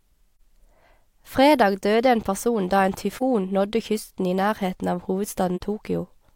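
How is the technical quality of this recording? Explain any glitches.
The recording has three brief dropouts. Short soft-edged holes, each about 40 to 70 ms wide, occur at 0.35 to 0.41 s, at 3.16 to 3.23 s right after "en person da en", and at 5.56 to 5.61 s. This is AAC frame loss with muting. Each gap fits one lost frame of about 43 ms whose spectrum the decoder zeroed. The overlapping windows fade the sound out and back in.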